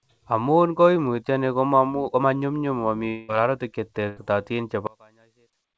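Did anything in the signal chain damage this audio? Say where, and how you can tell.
Yes. Network stage: from 3.08 to 3.30 s, just after "konyumnyum momi", a likely long network dropout leaves a fading buzz-hiss fill, about 0.2 s of audio lost rather than paused.

Network again: a burst of packet loss at 4.08 to 4.19 s, after "konyumnyum momi ororutik", is a shorter 80 ms concealed gap, too brief to decay into silence.

Playback or wiring: from 4.87 s to the end, the mono sum drops by about 32 dB, likely one channel inverted cancelling the centred speech, unlike a dropout, which would leave a fading fill rather than a steady faint copy.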